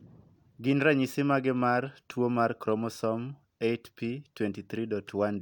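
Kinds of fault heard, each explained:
No technical fault can be heard anywhere in the speech, and the signal stays steady and intact throughout.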